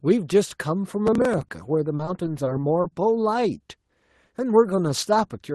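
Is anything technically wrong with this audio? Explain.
Yes, there are two faults in this speech.

From 1.07 to 1.49 s there is processor overload crackle. The processor fell behind and missed a run of audio deadlines, around fifteen of them, and skipped each missed buffer rather than holding it. Each missed buffer was about 3 ms long and left a small hard-edged hole. Together they give a gritty, tearing crackle over the speech that stops once the load eases.

From 1.96 to 2.85 s there is repeated packet loss that gives a robotic sound. Audio arrived missing again and again, leaving nine short gaps, the longest about 30 ms. Each gap was patched by stretching the preceding sound, about 150 ms of concealment in all, roughly a sixth of the stretch. The speech turns choppy there, with small pieces missing. Throughout the clip the call path limits the band to about 12 kHz.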